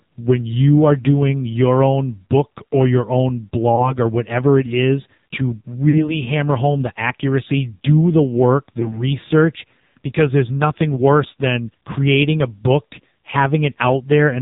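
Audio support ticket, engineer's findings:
AMR narrowband mobile codec, throughout. Band cut at 4 kHz, heavy buzzy, synthetic coloration, consistent with a low AMR-NB mode near 5.9 kbps. Few excitation pulses per subframe and a coarse vocal-tract model are why the timbre sounds thin and artificial.

Lost AMR speech frames at 3.76–3.96 s (after "book or your own", before "or whatever it is"), 5.90–6.04 s (after "whatever it is to", before "hammer home the accuracy"), and 8.80–9.04 s (after "accuracy do the work"). Each is a brief dip or warble followed by rough recovery. The decoder is concealing the gaps by repeating the last good pitch and filter settings at falling gain. The first and third point to a single lost frame, the second to two.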